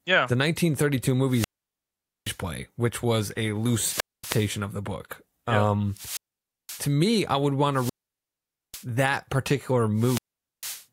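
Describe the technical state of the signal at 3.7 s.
At 3.7 s hiss swells, then a near-silent hole of about 235 ms opens before speech returns, a wireless microphone squelch dropout from 3.60 to 4.59 s, where fading radio signal triggered receiver muting.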